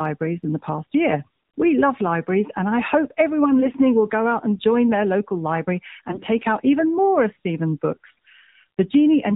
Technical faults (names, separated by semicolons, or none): AMR narrowband mobile codec; AMR bit errors